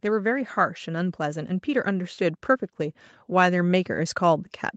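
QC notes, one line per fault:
0.05–4.5 s, automatic gain rising: the level of the speech and the background swells together by about 8 dB, as the gain control slowly raises its gain on a quiet input.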